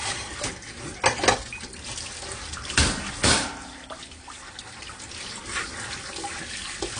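From start to finish the audio is dull, with nothing above 9.8 kHz, and sustained sounds carry a warbling, fizzy smear. That points to AAC compression, likely AAC-LC near 32 kbps. A plain low-pass filter would remove the top without this swirl.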